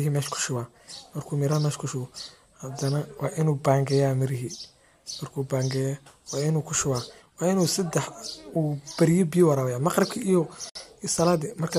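A speech clip with a gap at a join of encoded pieces from 10.69 to 10.75 s: a 58 ms gap, edges smeared, and the sound resumes where it stopped. Unlike a dropout, nothing is lost; untrimmed encoder delay and last-frame padding add silence.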